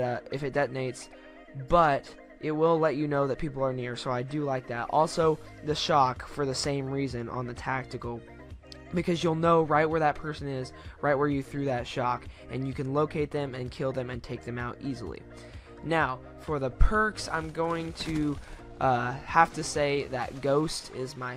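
No technical faults can be heard anywhere in this recording.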